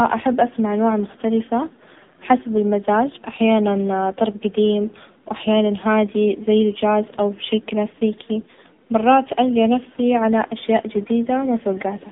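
Speech heard through the AMR narrowband mobile codec throughout: nothing passes above 3.8 kHz, and the buzzy, synthetic texture, unlike plain band-limiting, suggests a bitrate near 7.95 kbps.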